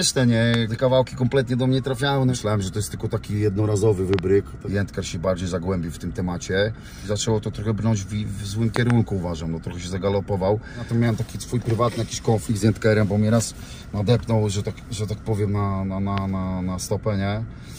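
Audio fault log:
0.54–0.56, 4.14–4.21, 8.76–8.92 and 16.18–16.20 s: loud pop. Single pops at the ends and doubled pops in the middle, about 15 to 20 dB above the sound, each likely a voltage spike added to the signal. Each shows as a tall narrow waveform spike and a full-height vertical stripe on a spectrogram, with the sound continuing underneath.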